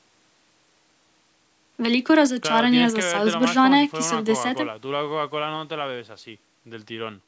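No faults found in this speech; the band tops out at 8 kHz and the lowest bass is rolled off, both expected from the call's microphone processing.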